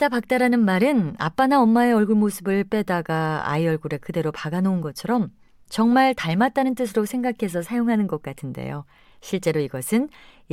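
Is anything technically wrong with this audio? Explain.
No, nothing is technically wrong.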